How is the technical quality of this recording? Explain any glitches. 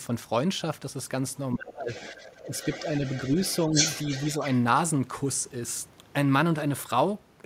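The recording has two kinds of fault, both from the echo control on a call.

Speech suppressed in double talk occurs between 1.54 and 1.89 s, and again from 2.13 to 2.25 s. The speech level drops, by roughly 25 dB in the first dip and about 5 dB in the second. The likely cause is both sides talking at once. The echo canceller could not tell the local talker from loudspeaker echo, so it turned both down.

The other side's voice leaks through from 1.9 to 4.57 s. A second voice sits behind the main talker, roughly 15 dB quieter. It likely comes from the far end playing on this device's loudspeaker. The echo canceller did not fully remove it from the microphone signal, so it stays audible under the local speech.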